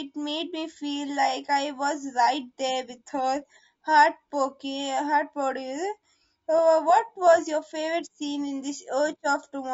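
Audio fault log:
Throughout, low-delay AAC compression: speech sounds rough and grainy, with noise between harmonics, likely from AAC-ELD's short frames starved of bits, fitting roughly 32 kbps.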